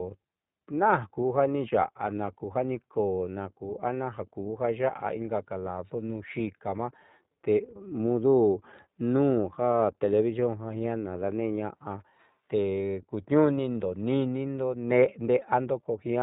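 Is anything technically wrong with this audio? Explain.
Yes. The speech has been through the iLBC codec for its whole length. Nothing above about 3.8 kHz survives, which gives the narrow telephone-band sound. The codec encodes each frame's excitation independently of the previous one, here using 20 ms frames at about 15.2 kbps. That independent, low-rate coding leaves plainly audible damage: the speech is intelligible but rough and slightly synthetic.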